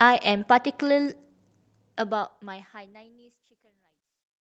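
No technical faults can be heard in this recording.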